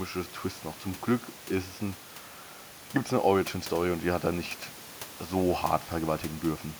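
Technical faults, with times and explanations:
No technical faults can be heard anywhere in the recording. A little background noise from the room sits about 21 dB below the speech, and it belongs to the recording space rather than to the system.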